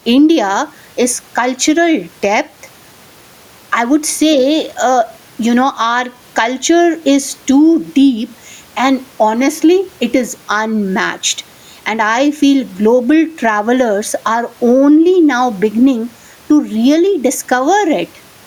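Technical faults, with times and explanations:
Throughout, gain pumping: the microphone gain is likely set far too high, so a fast limiter ducks each loud sound, with the gain swinging about 10 dB.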